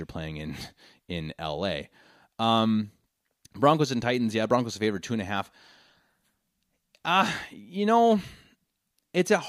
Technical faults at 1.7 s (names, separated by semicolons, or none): none